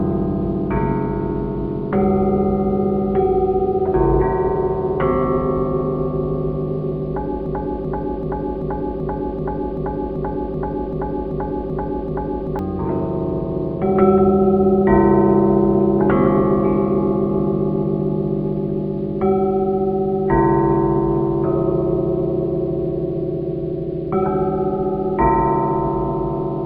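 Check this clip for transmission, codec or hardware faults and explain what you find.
One fault: a broken-record loop from 7.46 to 12.59 s. The player or stream likely stalled and kept resending its last held fragment, so a 385 ms piece repeats exactly, back to back, 13 times, and the audio that belonged there is lost.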